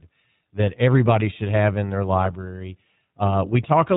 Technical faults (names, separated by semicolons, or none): iLBC codec